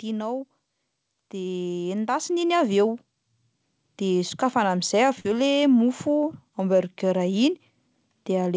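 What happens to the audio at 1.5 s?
The automatic gain rising from 1.3 to 2.9 s: the gain control judged the input too quiet and ramped up about 8 dB, so speech and background swell together.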